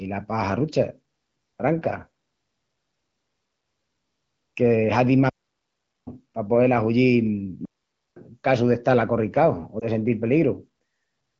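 Just after "que hazin más", a digital wireless dropout mutes the speech from 5.29 to 6.07 s, and a second one does so from 7.65 to 8.16 s. In each case the receiver lost too much data and cut the audio with a very short fade. The result is a clean silent hole of about 0.78 s and then 0.51 s, with no noise burst on either side. On a waveform these show as flat lines, and on a spectrogram as blank vertical bands across all frequencies.

Between 9.79 and 9.85 s, lost AMR speech frames cause a brief dip or warble. A single 20 ms frame failed its check, so the decoder repeated the previous settings at falling gain. This appears as a short, slightly smeared, weaker slice of the spectrogram.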